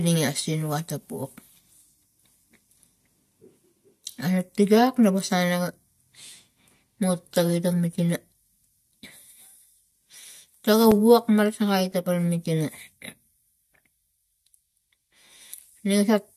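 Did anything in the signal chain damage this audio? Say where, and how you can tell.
Yes. Just after "mutagin ta mit", from 7.92 s to 11.92 s, the speech picks up a row of evenly spaced ticks, one per second, about five in all. Each is a gap of a few milliseconds dropped into the signal and filled with silence, so the waveform cuts abruptly to silence and back. These are periodic USB or driver dropouts at the driver or buffer stage: something on the host stalls the USB transfer or audio driver on a fixed one-second cycle, and the audio due in that moment is lost.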